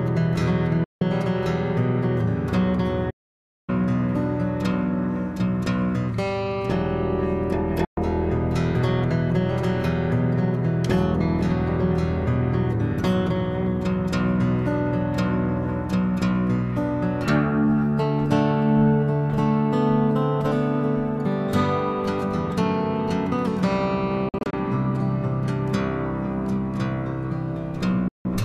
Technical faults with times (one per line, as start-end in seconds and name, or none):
0.84-1.02 digital broadcast dropout
3.10-3.70 playback stall
7.85-7.98 digital broadcast dropout
24.29-24.54 digital broadcast dropout
28.08-28.26 digital broadcast dropout